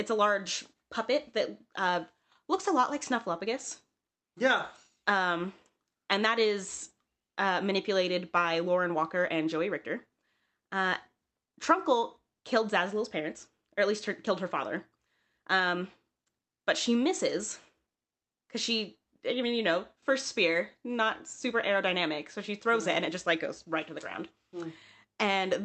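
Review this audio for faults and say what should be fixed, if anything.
The speech has a faintly unsteady, hurried pace, with small hiccups recurring at uneven intervals. This is clock drift between sender and receiver: the sending clock runs roughly 4 percent fast, so the receiver's jitter buffer keeps overfilling and has to shed audio. Prevent it by having the receiver estimate the clock offset continuously and resample smoothly to match.

From 0.11 s to 25.60 s, tiny slices of speech are cut out at uneven intervals. These are repeated timing corrections: the receiver keeps cutting brief pieces to keep pace with a sender running at about 104 percent speed, always trimming in the same direction but unevenly spaced. Replace the discard-based catch-up with continuous, drift-compensating resampling so no audible edits are needed.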